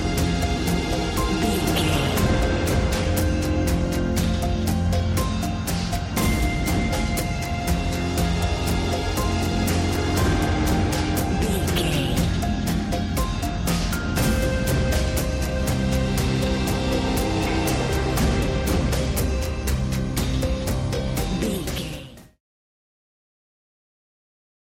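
No technical faults; the level just tapers off in a smooth editorial fade-out from around 21 s to 22.4 s, with no click or hard edge.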